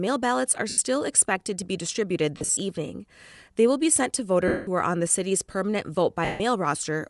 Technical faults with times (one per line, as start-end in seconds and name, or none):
0.00-7.10 Bluetooth LC3 compression
0.69-0.78 lost LE Audio frames
2.37-2.57 lost LE Audio frames
4.48-4.67 lost LE Audio frames
6.25-6.40 lost LE Audio frames